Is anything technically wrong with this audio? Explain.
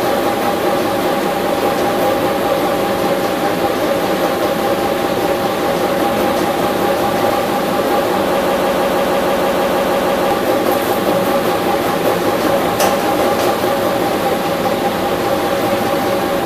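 Yes, there's a broken-record loop from 8.41 to 10.31 s. A 0.16 s fragment repeats 12 times back to back, likely because the player or stream stalled and kept resending its last chunk. It sounds like a rapid stutter, and the audio that belonged there is gone.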